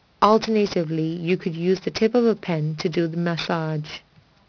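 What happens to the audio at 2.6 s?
At 2.6 s the speech carries aliasing, as it does for the whole clip. The sample rate was reduced without a low-pass filter first. Content above the new limit folds back below it. The edge sits at 5.5 kHz, which fits a drop from 16 kHz to 11 kHz. Sibilants come out gritty and metallic, with false tones at unrelated pitches. The folded energy sits roughly 15 dB under the speech, and the spectrum runs hard up to 5.5 kHz.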